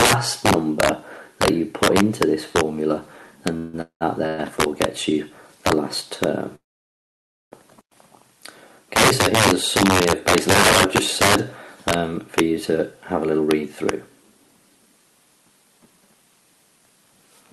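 Integer overflow runs through the whole clip. The signal is driven about 12 dB past full scale, and the peaks over the limit, a small fraction of the samples (around one to two percent), wrap to the opposite sign instead of being held at the ceiling. Each of those peaks flips across the entire range, so the loudest moments crack violently, far sharper and harsher than ordinary clipping would sound.

A call audio freeze hits four times: 3.57 to 3.75 s, 3.81 to 4.03 s, 4.27 to 4.40 s, and 6.55 to 7.54 s. At each point the last sound is stretched into a fading buzz. In the second the buzz gives way to about 110 ms of silence, and in the long fourth one to about 920 ms of silence. The cause is likely packets held up in transit, which leaves the jitter buffer empty. When the audio returns it carries on from where it stopped, so nothing is lost, but the gaps add roughly 158, 195, 114 and 964 ms of delay.

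A jitter buffer speed-up follows from 13.25 to 13.64 s. With the buffer now holding more audio than it aims for, the receiver trims short pitch-period pieces, around 70 ms in total, to claw back the delay. That passage plays at 117% speed at unchanged pitch, so the sound briefly feels hurried and rushed. Beneath all of this the Opus call path's band limit of 12 kHz caps the top end.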